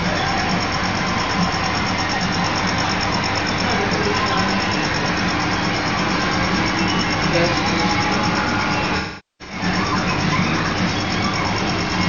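AAC frame loss with concealment, 8.97 to 9.64 s: lost frames are patched from the last good spectrum, which smears, then fades through a roughly 400 ms gap.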